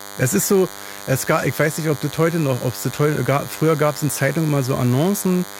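Throughout the speech runs a DECT cordless phone buzz: a nearby handset or base emits radio bursts 100 times per second, which the audio circuitry rectifies into sound. The result is a thin, steady 100 Hz buzz rich in harmonics, sitting roughly 15 dB below the speech.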